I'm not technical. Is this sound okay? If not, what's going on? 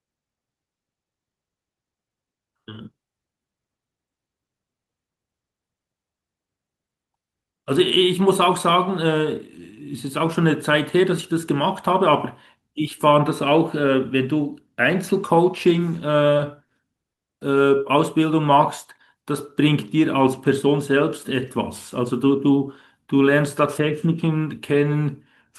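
No. Around 16.37, 16.67 and 17.15 seconds the speech briefly hangs: each is a short stall from a late packet, where a chunk of audio arrived late and the receiver held the previous sound for about 20, 20 and then 40 milliseconds. Nothing is lost.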